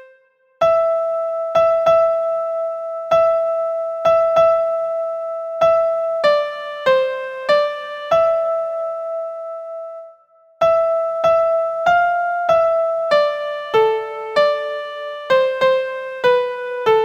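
No technical faults can be heard anywhere in this clip.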